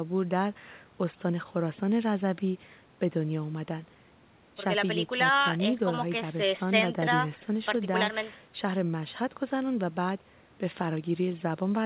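No technical faults are audible.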